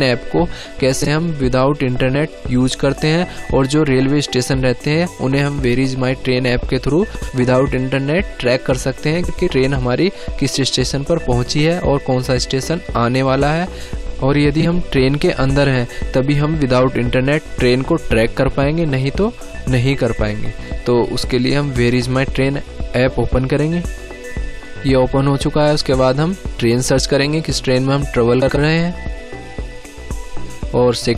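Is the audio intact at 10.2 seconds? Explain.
Yes, the audio at 10.2 seconds is intact, with no dropout, click, distortion or other fault at that moment.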